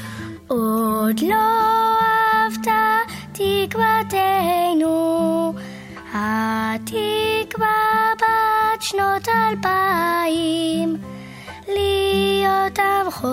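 From start to finish there's a video or display buzz sitting under the sound: a steady 75 Hz drone with a layer of fuzzy hash over it, somewhere around 35 dB down. That's a screen or video cable leaking its refresh into the audio path.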